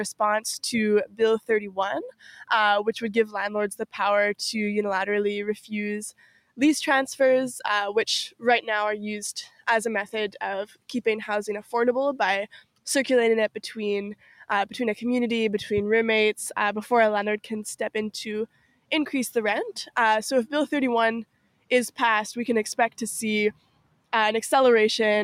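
A noise suppressor applied to music or sounds runs through the whole clip. A processor built to separate a talker from background hiss keeps judging sustained, steady material to be noise and pulling it down. As its estimate shifts, the level swings by something like 10 dB. Attacks pass largely intact while held parts and decays sag, so the sound pumps and thins instead of sitting at a stable level.

Sound cut by the noise suppressor occurs in eight passages: 1.06 to 2.31 s, 5.61 to 6.59 s, 9.48 to 9.67 s, 10.66 to 12.86 s, 14.15 to 14.43 s, 18.47 to 18.91 s, 21.25 to 21.98 s and 22.9 to 24.13 s. In each, the suppressor treats what it hears as noise and ducks it harder than the surrounding audio, by about 15 dB at 9.48 and 14.15 s and about 18 dB in the others. The actual dips total roughly half a second or less within each window, somewhat longer in the last. Sustained or fading sound there drops away or has its tail clipped short.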